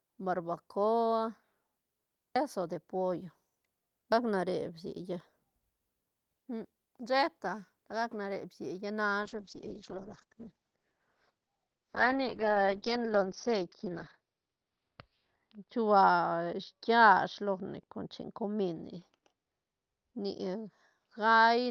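At 9.22 s a call bitrate drop sets in and lasts to the end of the clip. The speech loses its top end, with the audio band narrowing from around 20 kHz to 6 kHz, and the coding turns coarse and watery. That fits the encoder being pushed from roughly 32 kbps down to 8 kbps after the bandwidth estimate fell. The roughest stretch lasts about 5.6 s, and the sound stays muffled through the end.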